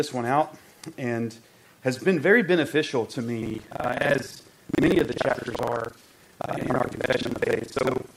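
Buffer tearing from 3.41 s to the end: writer and reader crossed mid-buffer, so about 70% of each 2048-sample block replays audio a tenth of a second old, buzzing at 23.4 Hz.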